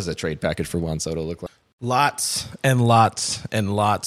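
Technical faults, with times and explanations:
1.45–1.48 s, damaged data in a compressed stream: a brief disruption of about 30 ms cuts into the speech, unrelated to what surrounds it. Part of the compressed data at this point was lost, zeroed or overwritten, so the decoder could not read those frames properly. It lost sync, and had to hunt for the next valid frame header before clean audio resumed.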